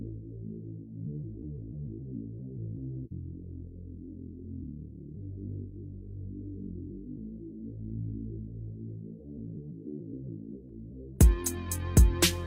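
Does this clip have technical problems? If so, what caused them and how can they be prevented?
No, nothing in this one sounds off on a technical level, so there's no problem here that needs fixing or heading off.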